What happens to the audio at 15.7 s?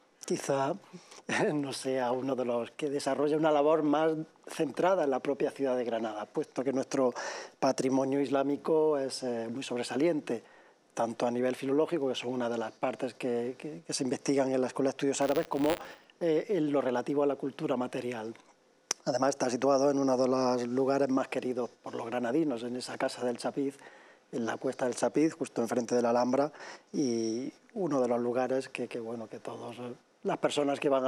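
That moment sits inside a patch of buffer tearing, running from 15.21 to 16.05 s. The writer and the hardware reader have slipped and cross each period, so a small sliver of each buffer replays audio from roughly 40 ms earlier. You hear it as a rough 100 Hz robotic buzz.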